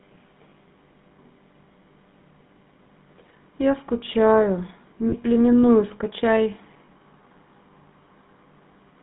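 GSM full-rate codec throughout this speech clip: the voice is rebuilt from a vocal-tract model driven by sparse regular pulses, giving a buzzy, gravelly roughness, confined to roughly 150 Hz to 3.5 kHz, which fits 13 kbps coding. Lost GSM frames at 0.50–0.52 s, 5.08–5.14 s and 6.86–6.89 s: the decoder repeats the last good frame, briefly leaving a rough metallic ring, longest in the 40 ms gap.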